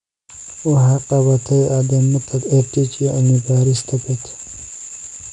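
From start to finish the speech carries 4-bit ADPCM compression. Each sample is coded as a coarse step from a prediction, so a gritty hiss rides on every loud syllable. Nothing sits above about 10.6 kHz, which points to a low sample rate near 22 kHz.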